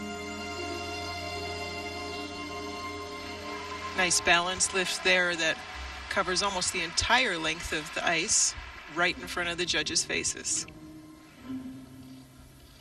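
No technical fault can be heard anywhere in the clip. At no point does the signal break off, jump or change in character.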